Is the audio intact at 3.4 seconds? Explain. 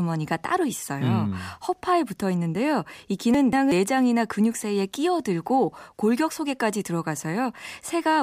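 No. From 3.34 to 3.72 s the speech jumbles briefly. This is chunks out of order: one roughly 186 ms chunk arrived late and plays after its successor, so nothing is lost but the sequence is swapped.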